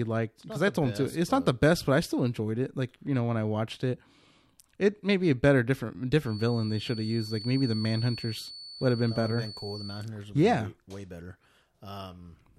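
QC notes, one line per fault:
6.21–10.1 s, feedback whistle: the loudspeaker-to-microphone loop is likely sitting just at the edge of instability, with loop gain near unity at one frequency, so that tone keeps recirculating without building into a howl. The speech carries a thin, steady 4.5 kHz whistle for nearly four seconds, about 15 dB under the speech, swelling and fading slowly in level as the loop gain drifts, then gone after 10.1 s.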